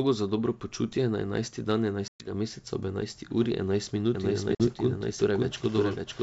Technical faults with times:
2.08-2.30 packet loss on an ADPCM call
4.15-6.23 doubled audio track
4.55-4.67 packet loss on an ADPCM call

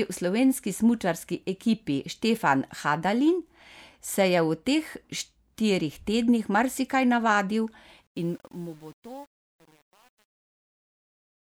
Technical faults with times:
8.07-11.45 truncation distortion on a fade

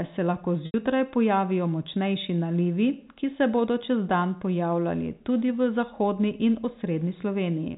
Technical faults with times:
0.66-0.74 packet loss with pitch repetition

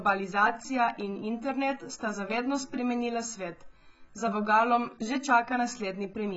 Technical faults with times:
0.00-6.37 AAC compression

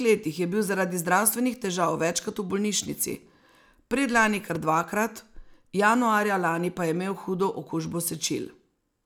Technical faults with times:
4.55-4.58 loud pop

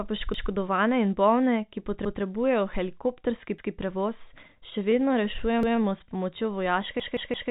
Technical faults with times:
0.34-0.51 repeated buffer
2.05-2.22 repeated buffer
3.58-3.75 repeated buffer
4.23-6.13 repeated stalls (stutter)
5.63-5.80 repeated buffer
7.00-7.50 repeated buffer

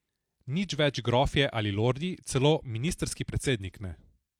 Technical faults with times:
none

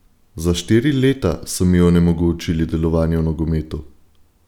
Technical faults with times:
none

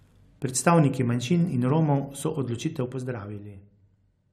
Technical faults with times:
2.73-3.67 zipper noise

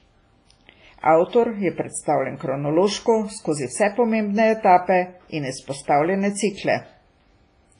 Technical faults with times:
0.00-7.79 WMA compression

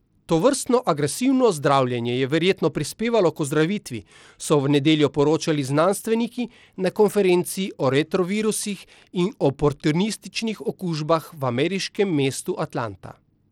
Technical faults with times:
0.00-13.51 Bluetooth SBC compression

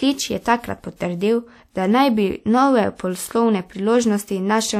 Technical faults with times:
0.96-1.00 pre-echo

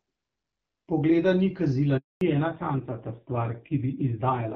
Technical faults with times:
1.97-2.21 handover gap
2.21-4.55 fallback to narrowband

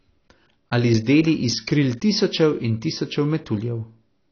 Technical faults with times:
0.00-4.32 AAC compression

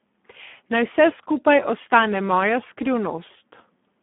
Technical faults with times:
0.00-4.03 Speex codec

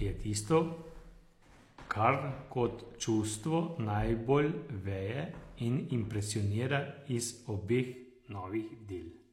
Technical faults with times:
7.94-9.32 channel delay (comb filtering)

